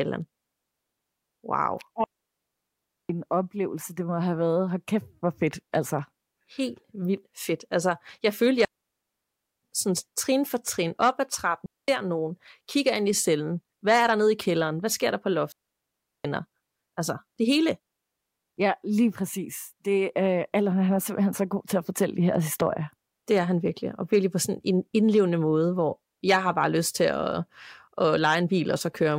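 At 2.04 s the speech drops into a clean hole lasting about 1.05 s, returning on "oplevelse det må have"; after "jeg følte" another falls from 8.65 to 9.63 s; a short 0.22 s gap at 11.66 s sits between "op ad trappen" and "nogen kigger ind i"; the last runs 15.52 to 16.25 s. Each is a digital wireless dropout: the receiver loses too much data and mutes with a very fast fade, leaving near silence without crackle. The waveform flatlines, and the spectrogram shows blank vertical bands with sharp edges.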